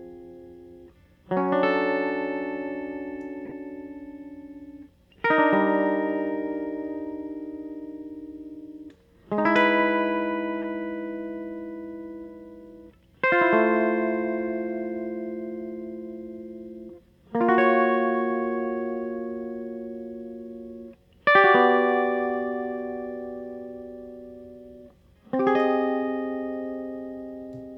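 At 3.45 s the music is hit by a corrupt frame decoded. Damaged bits in the compressed stream were played anyway, so misread gains and codes put energy at the wrong frequencies. It lasts until 3.52 s, spanning about three frames, and sounds like a brief glitch peaking near -25 dBFS. A second, shorter one follows from 10.62 to 10.64 s. It covers roughly one frame and is a quieter glitch, around -30 dBFS.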